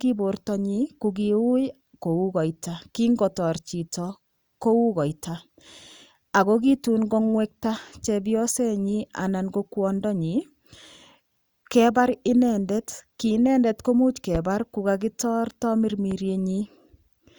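Two loud pops cut into the speech late on. The first, from 14.35 to 14.38 s just after "inendet komuch", is a sharp single spike peaking about 10 dB over the talking. A softer one follows at 16.11 to 16.14 s, roughly 5 dB above. Each is a brief jolt laid on top while the speech carries on underneath, likely a voltage step from a plug, switch, static discharge or driver glitch slipping into the signal path.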